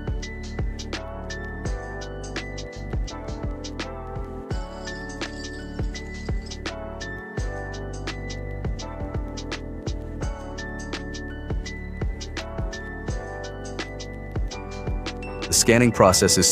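No audible technical faults anywhere in the recording.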